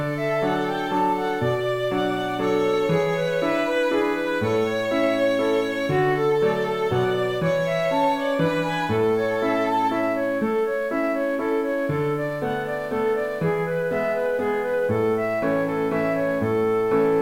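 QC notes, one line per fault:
Throughout, low bit depth without dither: the audio sits on a coarse grid of about 7 bits and was truncated rather than rounded, with no dither to decorrelate the error, so the quantisation error follows the waveform instead of forming a steady hiss. It sits roughly 35 dB below the signal and is heard as grainy, signal-dependent distortion. Quiet passages turn gritty, and the lowest-level moments sputter between adjacent steps or collapse to silence. This likely comes from a low-resolution conversion stage.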